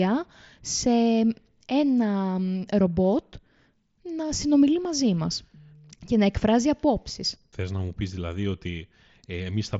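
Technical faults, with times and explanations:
No technical faults are present; the speech arrives over a Bluetooth mSBC headset link, so nothing extends above about 7.7 kHz and the louder sounds carry a light grainy texture from that codec.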